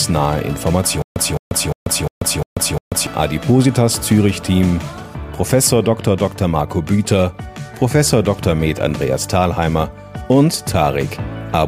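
The playback or stream likely stalled between 1.02 and 3.07 s, replaying its last buffered fragment at each retry before running dry, which produces a stutter with silent gaps. The same 213 ms burst of audio repeats six times at an even 352 ms pace, each repeat followed by about 139 ms of digital silence, so the passage sounds like a mechanical skip-and-drop pattern. Whatever should have played across those two seconds is lost.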